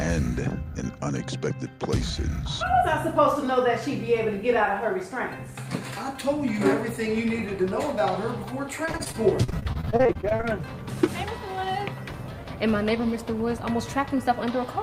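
From 8.85 to 10.45 s the sound turns choppy and robotic, with small pieces missing. This is repeated packet loss: around twenty short holes, none longer than about 39 ms, each patched by stretching the preceding sound, so nearly a third of the stretch is filler.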